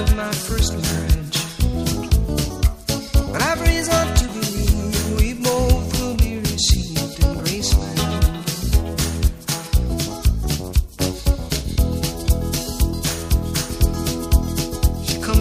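No dropouts, glitches or level problems are audible anywhere in the clip.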